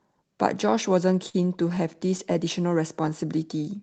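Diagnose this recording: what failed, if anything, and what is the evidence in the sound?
Repeated stalls (stutter) at the network and jitter buffer. From 1.29 to 2.37 s, about ten brief holds, longest 43 ms, stretch the speech. Late packets emptied the buffer repeatedly.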